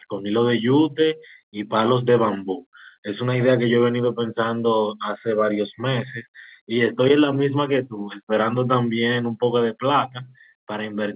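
No technical faults can be heard in the speech, which comes over a standard mu-law G.711 telephone path at 8 kHz with its usual top limit of 4 kHz.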